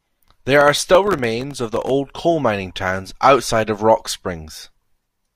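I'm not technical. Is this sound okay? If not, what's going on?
No. From 0.47 to 1.90 s the computer was too busy to deliver its tiny chunks of audio on time, missing around thirty over that stretch. Each miss left a brief silent gap, so the speech there carries processor overload crackle, a gritty tearing sound.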